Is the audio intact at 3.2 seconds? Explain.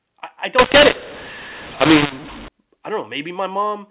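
Yes, the speech at 3.2 seconds is intact, carried cleanly through the narrow telephone-band G.711 coding with no dropout, click or distortion at that point.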